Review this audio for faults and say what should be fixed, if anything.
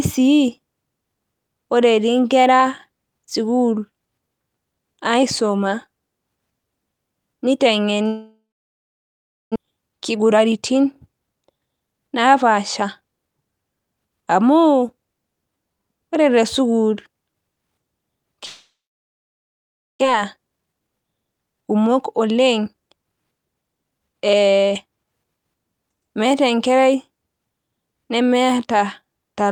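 Long network dropout at 8.07 to 9.58 s and again at 18.45 to 20.05 s: the speech stops, a fading buzz continues the last sound for a moment, then roughly 1.1 s and 1.3 s of near-silence follow before the speech resumes with about a second of it simply gone. This is likely a break in packet delivery, with the receiver concealing the gap rather than recovering the lost audio.

Jitter buffer speed-up at 9.62 to 13.09 s and 20.13 to 24.21 s: right after each dropout the speech runs about 13% fast at unchanged pitch and sounds hurried. The delayed packets arrived in a burst, overfilling the buffer, and the receiver trimmed small pitch-period slices repeatedly to shed the extra delay, roughly 0.4 s the first time and half a second the second.

To prevent this, stabilise the network path or add redundancy such as FEC, and let the jitter buffer drain more gently after bursts.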